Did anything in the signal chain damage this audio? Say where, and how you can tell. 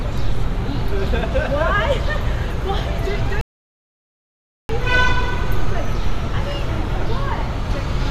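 Yes: a rebuffering stall at playback, 3.41 to 4.69 s. The player's buffer ran dry, adding 1.28 s of silence. Unlike a dropout, the sound then resumes where it stopped, with nothing missing.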